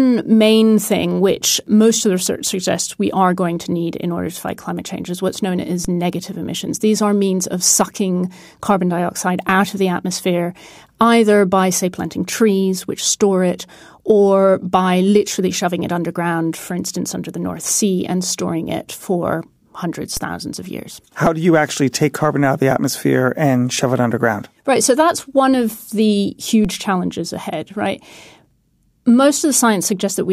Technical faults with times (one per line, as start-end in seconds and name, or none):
5.85 DC step
20.17 DC step
26.65 DC step